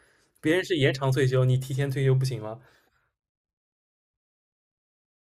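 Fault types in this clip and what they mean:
No technical faults can be heard in the speech, and the signal holds steady and unbroken from beginning to end.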